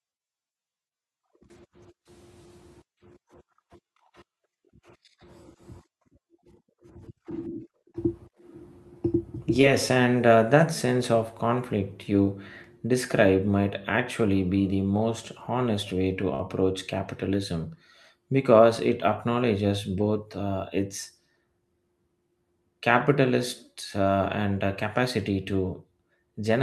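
A speech clip with two network dropouts. At 9.61 to 9.65 s, just before "and uh that sense", there is short concealed packet loss: about 20 ms of audio never arrived and the decoder papered over it by extending the preceding sound, leaving only a brief smear or wobble rather than an audible gap. At 16.35 to 16.41 s, between "most honest way to" and "capitalism because it acknowledges", a burst of packet loss removes about 40 ms. Here the concealment runs longer, holding the last sound as a fading buzz or hiss for roughly 46 ms before jumping ahead. That sustained, decaying fill and the skip in the speech are what set it apart from the earlier, briefer glitch.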